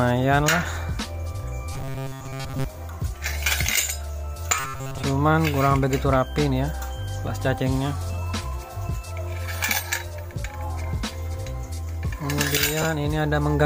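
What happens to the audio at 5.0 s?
Robotic sound from repeated short buffers runs from 4.60 to 5.02 s, so 5.0 s falls near its end. The sound collapses into a rigid, metallic buzz at a fixed 134 Hz. The likely cause is audio arriving too slowly, with the playback filling the gaps by looping a fragment about 7.5 ms long. That repetition sets the buzz pitch, and most of the real audio in that span is replaced by repeats.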